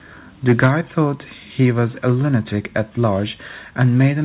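From 0.48 to 0.67 s the loudest syllables take on a harsh, crackling edge, with peaks about 6 dB over the converter's limit and a few percent of samples flattened. This is microphone overload, likely from input volume set too high. Unlike the steady, band-limited coding noise of the narrowband call path, which has nothing above 4 kHz, fitting G.711 A-law, the crackle appears only on loud peaks. It recurs more faintly at 2.07 to 2.10 s (about 1 dB over) and from 3.81 to 4.04 s (about 4 dB over).

At 0.66 s, right at the end of that first distorted peak, sound and background together drop by about 2 dB in a single step. This is the microphone volume stepped down, likely by the call software reacting to the clipping. It is an abrupt step rather than a gradual fade, and the level stays lower afterward.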